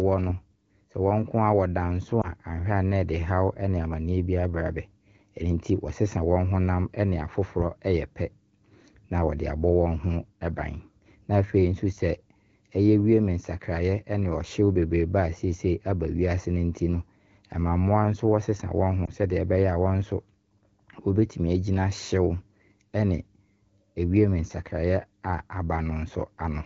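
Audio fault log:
2.21–2.30 s and 19.06–19.12 s, lost AMR speech frames: at each point one 20 ms frame fails its check, and the decoder covers it by repeating the previous pitch and vocal tract settings at reduced gain. The result is a short dip or warble rather than a hard silent gap or click, which sets it apart from a plain dropout. Because only a single frame goes each time, there is no drawn-out fade to silence, and the clear 12.65 kbit/s wideband sound returns after a moment of weak or rough voice.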